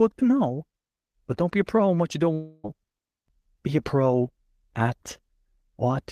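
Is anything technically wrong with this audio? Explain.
Yes. From 2.33 to 2.66 s, just after "in what you don't", there is a long network dropout, likely from lost packets. About 0.3 s of speech is gone, and the receiver stretches the last sound into a fading buzz or hiss across the gap. On a spectrogram this shows as a decaying smear without new structure before speech resumes abruptly.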